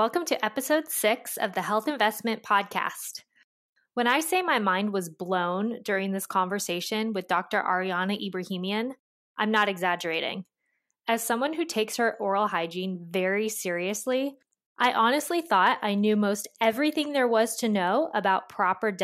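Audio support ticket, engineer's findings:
Engineer's findings: no audio fault found in this speech clip.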